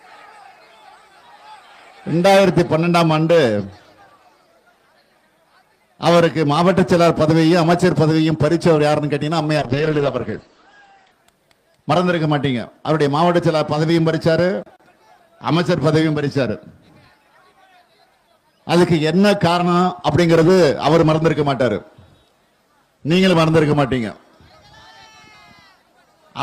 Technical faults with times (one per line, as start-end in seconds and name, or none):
9.59-11.19 call bitrate drop